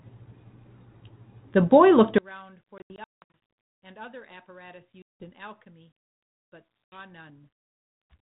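Speech carried over a 32 kbit/s G.726 ADPCM link, band-limited below 4 kHz, drops by about 29 dB from 2.18 s to the end, leaving a faint residue, likely because one channel is inverted and cancels on mono summing. Packet loss on an ADPCM call cuts hard-edged holes at 2.78 to 3.37 s (about 380 ms lost across 560 ms, longest gap 180 ms), 5.02 to 5.30 s (180 ms) and 6.85 to 6.97 s (80 ms). Each hole is followed by brief slight distortion while the decoder's predictor resynchronises.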